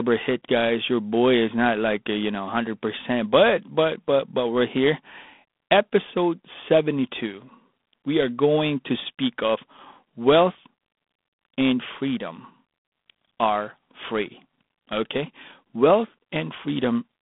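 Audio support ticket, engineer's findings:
G.726 ADPCM, throughout. Harsh, rasping hiss riding on the speech, rising and falling with its level. Band limited to 200 Hz to 3.5 kHz, nothing above 3.8 kHz. Few bits per sample of prediction error. Grain fits 24 kbit/s coding.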